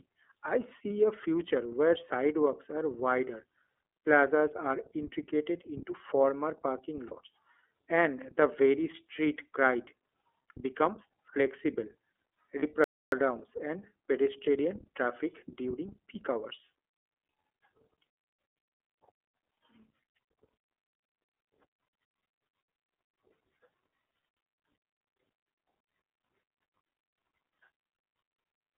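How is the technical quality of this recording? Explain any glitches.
The recording is degraded: the whole clip carries plainly audible iLBC codec damage, with two brief dropouts and one silent stall.

iLBC codec: The audio is squeezed into a telephone band of roughly 300 Hz to 3.5 kHz and coded in independent 30 ms frames, a pattern that fits the 13.33 kbps mode. Speech sounds rough and slightly synthetic. On a spectrogram, everything above 3.5 kHz is empty.

Lost iLBC frames: At 7.07 to 7.15 s, right after "integrated into former parking", and again at 12.60 to 12.64 s, about 30 ms of audio went missing each time. The decoder filled each gap by repeating the last pitch cycle with noise, giving a short buzzy held vowel. Speech recovers immediately. A spectrogram shows smeared, repetitive harmonics there.

Playback stall: From 12.84 to 13.12 s, a 280 ms silence cuts the sound mid-flow before "and pedestrian traffic during" resumes. 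The likely cause is the player running out of buffered data or being blocked. The waveform drops to a flat line, and the spectrogram shows a blank vertical strip.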